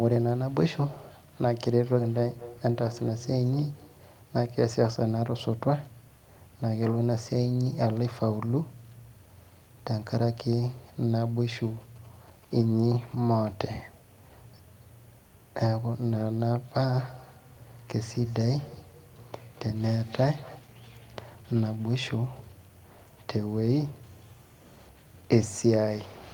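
From 1.8 to 4.13 s there is feedback echo between two devices. A second device in the room replays the call, and its sound loops back into the microphone, which the microphone's own echo canceller cannot remove because its device did not play that sound. The speech returns roughly every fifth of a second, thinner and ringing, peaking about 16 dB below the speech.

From 11.81 to 12.54 s, GSM signalling bursts appear. A nearby 2G phone is signalling, and the audio circuit rectifies its radio bursts into a faint galloping pattern of short buzzes at 217 Hz.

The same two-device feedback echo returns from 16.94 to 20.65 s, again repeating roughly every fifth of a second, but weaker, peaking about 23 dB below the speech.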